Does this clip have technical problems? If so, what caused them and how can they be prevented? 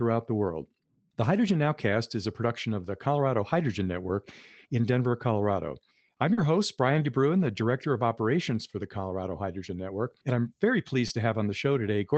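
Yes, two kinds of packet trouble. First, short concealed packet loss at 6.33 to 6.39 s (about 40 ms) and 11.07 to 11.11 s (about 20 ms). Audio didn't arrive in time, so the decoder stretched the last sound and blended back, leaving a brief smear. Giving the jitter buffer more headroom or fixing the congested link prevents it.

Second, a lost packet rebuilt from error correction overlapping each gap, at 6.37 to 6.43 s (40 ms, which sounds like two packets' worth) and 11.09 to 11.11 s (20 ms). Opus played the low-bitrate backup copy carried in the next packet, so there's no hole, just a rougher, noisier patch on top of the normal coding texture of an 8 kHz-wide call. Cutting the underlying packet loss is the fix.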